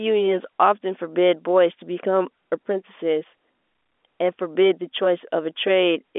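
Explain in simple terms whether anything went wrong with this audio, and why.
Nothing went wrong with this audio; it sounds the way an ordinary telephone call is meant to sound.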